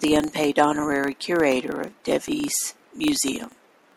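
A speech recording with a 25 Hz buzz running all the way through. That's a filter restarted on every block: each block starts from silence, so a small transient repeats at the block rate and swells with the level of the voice.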